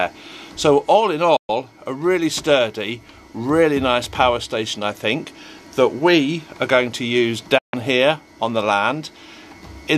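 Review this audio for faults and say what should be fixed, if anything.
Two digital broadcast dropouts are audible: the audio fades to silence over about 8 ms at 1.36 s and returns at 1.50 s, then drops again from 7.58 s to 7.74 s. The receiver muted while frames failed to decode, so about 120 ms and 144 ms of programme are lost. The gap lengths fit five and six frames of 24 ms. Improving reception margin, through antenna placement or signal strength, prevents these dropouts.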